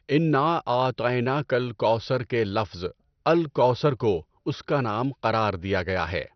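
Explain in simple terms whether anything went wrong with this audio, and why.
The speech sounds dull and gurgly from start to finish, with nothing above about 6.2 kHz, most likely from heavy MP2 compression switching off upper bands.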